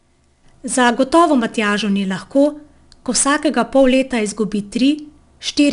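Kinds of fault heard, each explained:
4-bit ADPCM compression: each sample is coded as a 4-bit step from a predicted value, so the error is noise that follows the speech level. Here it's a plainly audible grit throughout, and nothing above 10.6 kHz, which fits roughly an 89 kbps stream.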